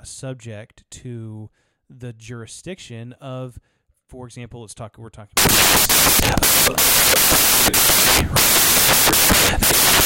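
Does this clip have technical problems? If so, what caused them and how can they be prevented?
Yes. From 5.37 s to the end of the clip at 10.05 s, the speech gives way to loud broadband noise. This is samples built from the wrong bytes. The reader assembles each sample incorrectly. It may be off by one byte, swap the byte order, or assume the wrong alignment. The rapidly changing low bits then form the large part of each value. To prevent it, declare and verify the sample format, byte order and frame alignment at every read.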